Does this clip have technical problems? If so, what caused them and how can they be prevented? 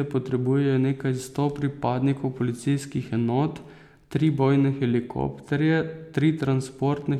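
No, the speech signal shows no technical faults, so there is nothing here that needs a cause or a preventive measure.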